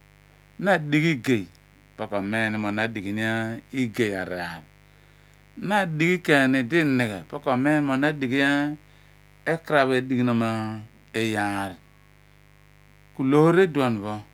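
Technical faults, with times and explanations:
throughout, mains buzz: a steady, raspy buzz runs under the speech from start to finish, roughly 30 dB below it, with a hard, gritty edge rather than a smooth low hum. It is tied to the 50 Hz mains: sharp switching spikes leak into the signal twice per cycle, and those narrow pulses spread energy across a dense ladder of 50 Hz harmonics reaching up into the kilohertz range, which is what makes it rasp.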